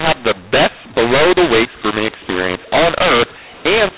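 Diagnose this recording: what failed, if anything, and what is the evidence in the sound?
Harsh, gritty speech throughout, with hiss filling the pauses: a mu-law and A-law mix-up at the codec stage, where A-law coded G.711 telephone audio was decoded as mu-law.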